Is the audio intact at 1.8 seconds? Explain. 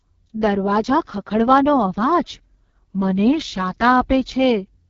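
No. At 1.8 seconds, as across the whole clip, the speech is coded with the AMR wideband (HD Voice) codec at what sounds like its lowest rate, near 6.6 kbit/s. A pulse-excited vocal tract model rebuilds the speech from sparse parameters, leaving it rough and raspy, with synthetic noise filling the top band and nothing above 7.4 kHz. Narrowband AMR would stop near 3.4 kHz, and a plain low-pass filter would leave the speech smooth rather than raspy.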